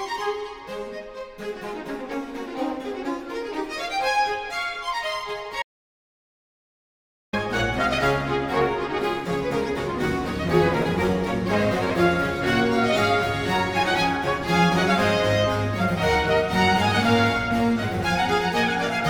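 An audio dropout to silence runs from 5.62 to 7.33 s, likely a lost input link: 1.71 s of flat, silent waveform and a blank spectrogram gap, with no room tone.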